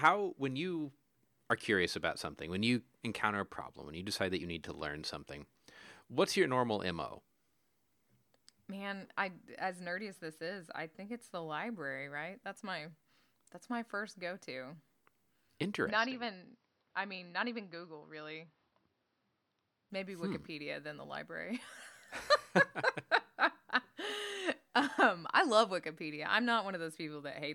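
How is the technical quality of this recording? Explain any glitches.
One glitch affects the speech. From 15.9 to 19.9 s the sound turns dull, with nothing above 5.8 kHz, about 5 dB quieter and with a faint new noise floor. This is likely an input switched to a poorer device mid-recording. There is no gap at either switch.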